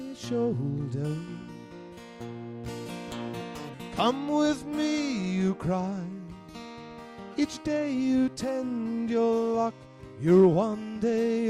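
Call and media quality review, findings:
Nothing stood out on listening that would warrant a finding against this clip.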